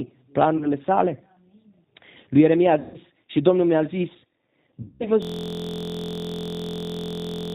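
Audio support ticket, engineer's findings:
G.729 codec, throughout: rough, synthetic speech at 8 kbit/s. Spectrogram shows nothing above 4 kHz; harmonics look smeared from the pulse-excitation model.

VoIP packet loss concealed by the speech codec at 0.57–0.71 s, 2.80–2.98 s and 4.82–5.06 s: decoder extrapolation (about 40, 140, 180 ms lost) gives buzzy tone or coloured noise, fading; waveform shows repeated periods shrinking.

System hang loop, 5.22 s to end: 23.22 ms segment repeats, fitting a 1024-sample ring buffer. 43.1 Hz buzz; waveform shows identical blocks, spectrogram vertical striping.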